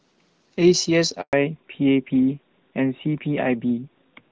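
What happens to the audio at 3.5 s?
At 3.5 s the speech is in a fallback to narrowband, which runs from 1.33 s to the end. The call has dropped from wideband HD Voice, which fits AMR-WB at 12.65 kbit/s, to a narrowband codec, which fits AMR-NB at 12.2 kbit/s. Nothing above 4 kHz survives, so the voice sounds duller and more muffled.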